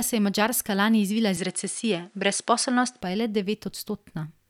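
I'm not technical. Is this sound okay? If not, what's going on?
No. From about 1.37 to 3.01 seconds, right after "lani izvila", the system likely switched its input to a poorer device, such as a different microphone or a headset, and then back again before "pa je le". During that stretch the sound loses its top end, turning dull, with nothing above about 10.5 kHz. The level shifts a little and a faint new background hiss appears. The change happens instantly, with no gap at either switch.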